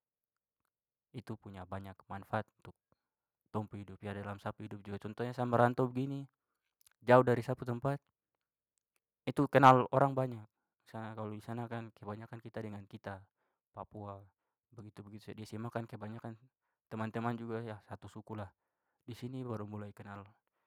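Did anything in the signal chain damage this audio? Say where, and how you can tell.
Yes. At 9.64 to 9.71 s, just before "orang banyak", the loudest peak turns harsh and crackly. This is microphone overload at the converter stage. The peak tops are flattened, with a few percent of samples pushed about 3 dB past full scale. Input gain was likely set too high.

At 9.81 s the level drops suddenly by about 3 dB. Voice and background fall together, again just before "orang banyak". This is microphone volume stepped down, in call processing. The software likely reacted to the clipped peak by cutting the device's input gain in one step.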